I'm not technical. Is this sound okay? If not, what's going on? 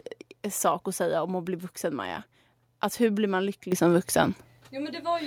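No, not quite. At 3.72 s the microphone volume stepped up: the call software decided the mic was too quiet and turned its input up in one go, so the voice and the background noise suddenly jump louder together.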